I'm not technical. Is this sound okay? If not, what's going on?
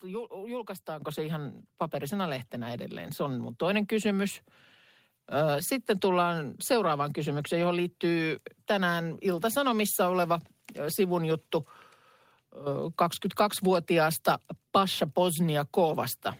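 No. At about 1.02 seconds the whole recording suddenly gets louder in one jump, the voice and the background noise together, and it stays at that higher level. This is a microphone volume stepped up. The calling software judged the microphone too quiet and turned up its input level all at once, instead of gradually. Because the boost happens at the microphone, everything it picks up rises by the same amount at that instant.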